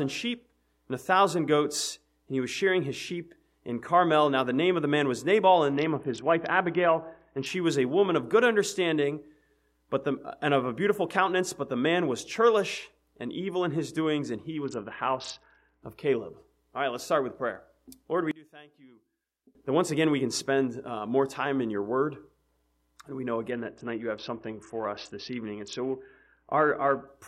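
From 5.73 to 7.46 s the treble goes dull and a gritty noise rises. This is a Bluetooth SBC bit pool drop. A congested link forced the encoder to spend far fewer bits. The top sub-bands get almost nothing. The rest are quantised coarsely. The sound fits a bit pool falling from 31 to 6, near 55 kbps. The same dull, gritty stretch returns from 14.64 to 15.83 s.

From 18.31 to 19.55 s the level drops by about 25 dB. Nearly all of the sound disappears, background included. Only a faint residue remains. The likely cause is one channel inverted. One stereo channel has flipped polarity. When the two channels are summed to mono, their shared content cancels. What survives is the small difference between them.

From 23.50 to 27.07 s the bit pool drop returns. The treble dulls again and the grit comes back.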